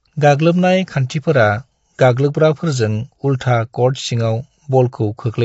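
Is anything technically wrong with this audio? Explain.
Yes. Throughout the clip, the speech was likely passed through low-delay AAC compression (AAC-ELD) at a rate that fits about 24 kbps. Its short frames smear pitch harmonics, so the voice sounds plainly rough and grainy, with nothing above 7.7 kHz.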